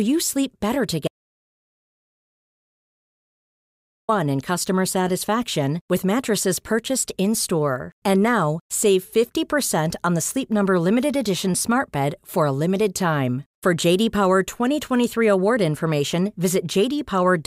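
At 1.08 s, just after "sleep better", the speech cuts off abruptly into dead silence, with no room tone or background left, and it resumes mid-flow at 4.09 s with "in customer satisfaction with". About 3.0 s of speech is simply gone. This is an audio dropout to silence, likely caused by the input signal being lost for that stretch, through a disconnected device, a failed link or an unintended mute, while the recorder kept writing silence.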